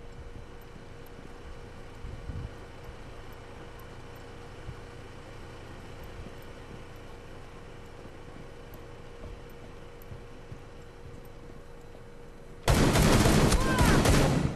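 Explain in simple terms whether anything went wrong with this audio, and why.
Twice, part of the compressed file was damaged: its bytes were lost, blanked, overwritten or mixed with other data. When the player reached those spots, it could not read the damaged pieces, lost its place, and had to search ahead for the next piece it could read. That is damaged data in a compressed stream. It shows up as two very brief disturbances, each lasting about 30 milliseconds, from 8.26 to 8.29 seconds and from 12.65 to 12.68 seconds.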